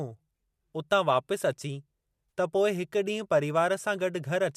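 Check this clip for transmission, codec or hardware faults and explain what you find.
One fault can be heard, around 2.30 to 2.32 s in the speech: AAC frame loss with concealment. About 30 ms of coded audio never reached the decoder, which fits a few consecutive short frames from what is likely a low-delay AAC stream. The decoder bridged the gap by reusing the last good spectrum with randomised signs and smoothed energy. The result is a brief smeared, noisy or phasey patch that blurs the detail of the speech before normal decoding resumes.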